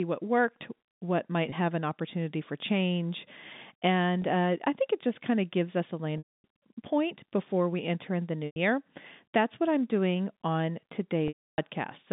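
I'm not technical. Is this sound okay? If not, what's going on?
No. There is packet loss with pitch repetition at 1.50–1.52, 4.22–4.24, 6.18–6.44, 8.46–8.56 and 11.28–11.58 seconds. Pieces of the speech went missing, so the receiver kept repeating the last bit of voice to fill each gap. The two brief gaps sound like a tiny buzzy hold. The longer ones, about a tenth to a third of a second, fade into silence before the speech resumes. Throughout, the narrow telephone-line sound of G.711 telephone coding is present.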